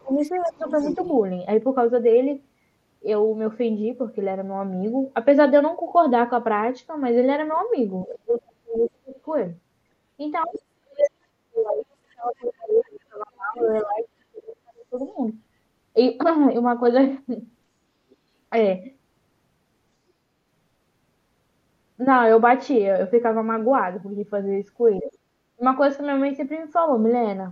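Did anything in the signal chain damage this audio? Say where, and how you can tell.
Yes, in call processing. The speech dips and breaks up in pieces at 0.00–0.68 s, 8.05–14.97 s and 24.98–25.63 s, falling by up to about 40 dB and spending around five seconds affected in the middle stretch. This is speech suppressed in double talk, likely an echo canceller turning everything down while both sides spoke.

A faint second voice comes through at 0.21–1.13 s, 10.43–10.59 s, 13.78–14.08 s, 18.10–18.15 s and 25.07–25.12 s, roughly 20 to 40 dB below the talker. That is the other side's voice leaking through, likely loudspeaker echo the canceller failed to remove from the microphone.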